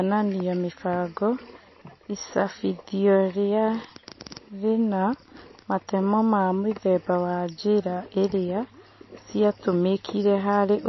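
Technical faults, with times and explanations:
Throughout, MP3 compression: likely a low-bitrate MP3 encode starving the spectrum, cutting everything above 5.8 kHz and leaving plainly audible watery, swirling damage on the speech.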